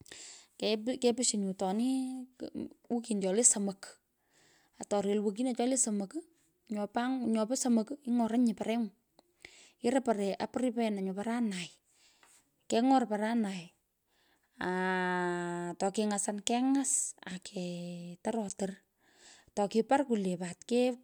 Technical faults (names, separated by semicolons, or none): none